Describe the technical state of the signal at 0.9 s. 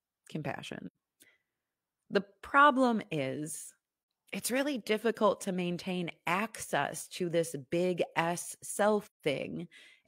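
Right at 0.9 s you're inside a short dropout from AAC frame loss with muting, running from about 0.86 to 0.95 s. The decoder zeroed the missing spectrum, so the overlapping windows fade the speech out and back in, leaving a soft-edged gap of roughly 85 ms, which fits two lost frames.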